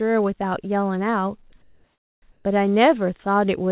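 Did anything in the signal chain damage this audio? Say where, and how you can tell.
Yes. At the call-processing stage, 1.50 to 1.52 s, a short stretch of speech gives way to steady, featureless noise before the sound resumes. This is likely sound dropped by the voice detector. Unlike packet-loss concealment, nothing is repeated or smeared; the speech simply stops briefly.

From 1.62 to 2.22 s and again from 2.32 to 2.44 s, the real background is replaced by smooth synthetic noise, about 2 dB different in level. This is likely comfort noise in place of the background. A noise gate would leave near silence instead. The call path's 4 kHz band limit fits a 64 kbps G.711 codec.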